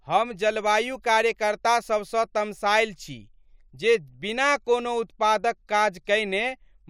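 Nothing in the recording stood out as a technical problem on listening.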